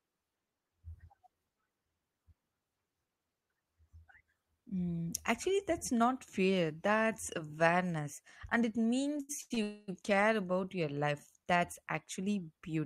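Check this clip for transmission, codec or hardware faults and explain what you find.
Two transmission faults occur back to back near the end of the clip, both from late-arriving network audio, and neither loses any speech.

Repeated stalls (stutter) run from 9.17 to 9.59 s, just after "that's awareness and it". Audio kept reaching the receiver's jitter buffer more slowly than it was played out, so the buffer emptied four times. Each time the receiver stretched the last sound to cover the wait, for 214 ms in total, the longest hold about 95 ms. About half of that stretch is filled-in sound, so it drags and stutters.

A call audio freeze follows from 9.63 to 9.90 s, likely caused by packets being held up in transit so the buffer ran dry. The receiver filled the wait by continuing the last sound for 250 ms, heard as a fading buzz or hiss rather than silence. When the audio resumes it picks up exactly where it stopped, so nothing is missing, but a quarter-second gap has been inserted and everything after it plays 250 ms late.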